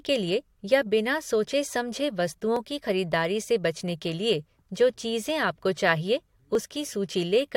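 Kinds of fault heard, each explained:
Overlap between stream segments: two consecutive chunks of this speech were stamped as sharing a stretch of time, and the player trimmed that stretch away even though it held real, non-repeated audio, so a few milliseconds vanish and the waveform jumps. That gives brief clicks or skips at about 2.56 s and 6.55 s, in a stream cut into one-second segments. Unlike a dropout, nothing goes silent; the sound simply lurches forward.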